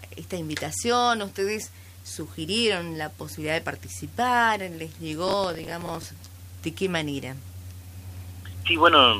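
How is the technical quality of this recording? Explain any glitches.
A single glitch affects the recording. From 5.28 to 6.03 s there is processor overload crackle: the processor repeatedly misses buffer deadlines, replaying stale audio with hard edges, which fits buffers of about 10 ms, heard as a gritty tearing crackle.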